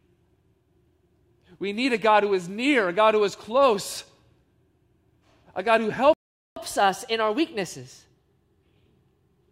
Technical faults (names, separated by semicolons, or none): playback stall; catch-up at higher speed